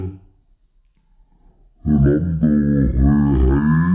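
Everything in the clip runs at half speed and sits a full octave low, 12 semitones down, so the audio drags and sounds heavy and murky from start to finish. The cause is a wrong sample rate. The samples are being played back at half the rate they were captured at, with no conversion. That fits material recorded at 16 kHz and reproduced at 8 kHz, which slows the timing and lowers the pitch by the same factor of two.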